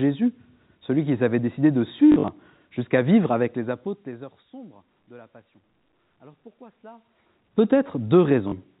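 From 2.12 to 2.28 s, between "qu'ils avaient décidé de" and "jusqu'à vivre", packet loss with last packet repeated scatters about 100 ms of repeats, runs up to 40 ms. The sound fits 20 ms packets and produces a 50 Hz robotic stutter. Between 3.39 and 4.61 s, from "jusqu'à vivre" to "de la passion", zipper noise appears as the level drops about 25 dB in unsmoothed steps, roughly 40 a second, ticking audibly. At 8.48 to 8.52 s, another 40 ms repeated-packet stutter occurs.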